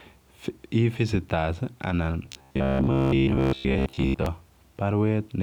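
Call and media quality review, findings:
Robotic sound from repeated short buffers, 2.23 to 4.26 s. Speech becomes a rigid metallic buzz near 67 Hz. Likely cause: audio arriving too seldom, playout looping a 15 ms chunk. Most real audio skipped in this span.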